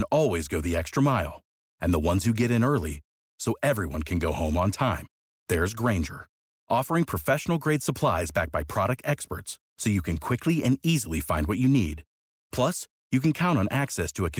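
Nothing in this speech recording stood out as a technical fault on listening, with the Opus voice compression carrying the sound at full bandwidth.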